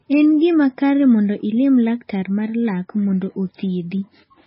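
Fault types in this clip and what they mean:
MP3 compression: The speech sounds dull, watery and swirly throughout, with nothing heard above about 5.5 kHz, so s sounds lose their crispness and the damage is heavy. This is likely MP3 coding at a very low bitrate, roughly 17 kbps. Short of bits, the encoder cuts the treble at a fixed point and drops quieter frequency lines, which then flicker in and out between frames and smear the onsets of sounds.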